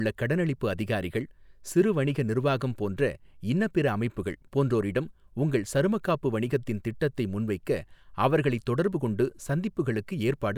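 Nothing here needs flagging, as the speech comes through without any technical faults to point to.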